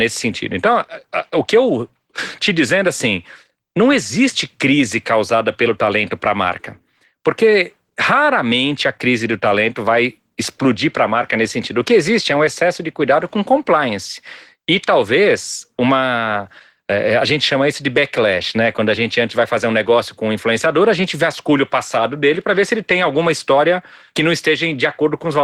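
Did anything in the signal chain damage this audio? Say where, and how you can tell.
Yes, at the codec stage: Opus voice compression damages the speech throughout. SILK's coarsely coded excitation below 8 kHz makes the speech plainly hoarse and slightly robotic, with a CELT layer above. This points to hybrid mode at roughly 16 kbps with 20 ms frames.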